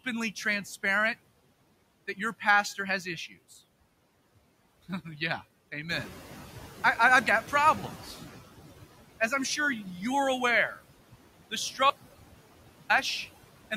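Noise suppressor artifacts run through the whole speech clip: steady noise is pulled down by about 17 dB frame by frame, so the noise sinks between words and rises under them. From 5.89 to 8.42 s the noise suppressor is catching up. The room noise steps up about 10 dB around 6 s, the estimate lags for about 2.5 s, and the louder noise then sinks by about 12 dB, visible as a brighter band that fades. An audio dropout to silence follows from 11.90 to 12.90 s, a one-second gap of silence with no room tone, seen as a flat waveform line and a blank spectrogram column, likely from lost input.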